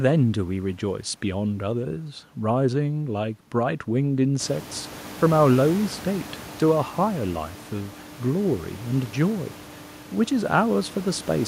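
Nothing's gone wrong with this speech recording; the background noise of the room climbs by about 19 dB at around four and a half seconds, but it stays about 20 dB under the speech and is simply part of the recording.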